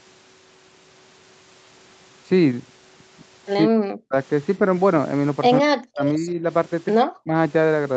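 Speech over a call path band-limited to 8 kHz, with the voice sinking deeply, by about 40 dB, at 3.66–4.15 s, 5.6–6.44 s and 7.05–7.35 s, likely speech suppressed in double talk by an echo canceller. These show as waveform gaps and faded spectrogram columns.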